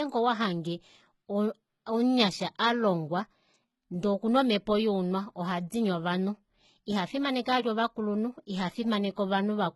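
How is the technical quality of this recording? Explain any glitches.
Quality's rough: the speech is heavily compressed throughout, likely HE-AAC at something like 16 kbps, with nothing above 11.8 kHz and synthetic, metallic-sounding treble and gritty s sounds from band replication.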